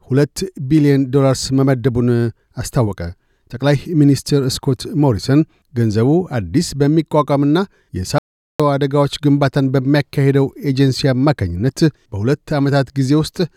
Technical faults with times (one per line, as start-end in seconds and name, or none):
8.18-8.60 audio dropout to silence